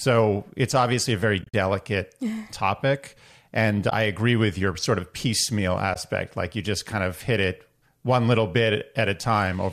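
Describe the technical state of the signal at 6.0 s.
Just before 6.0 s, from 5.94 to 5.96 s, there is AAC frame loss with muting. About 20 ms of audio, consistent with two low-delay AAC frames, was decoded as silence, so the overlapping windows fade the speech down and back up, leaving a soft-edged hole.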